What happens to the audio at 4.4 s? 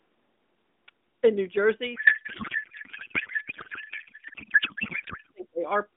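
At 4.4 s the sound is garbled noise and warble that barely tracks the speech, part of a codec payload misread running from 1.96 to 5.31 s. The decoder is unpacking AMR frames with fields misplaced, which fits octet-aligned packing being read as bandwidth-efficient.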